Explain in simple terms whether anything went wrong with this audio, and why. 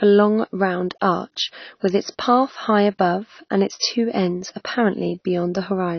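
The speech sounds dull and smeared from start to finish, with nothing above 6.6 kHz. The likely cause is AAC compression, which throws away fine detail to save space.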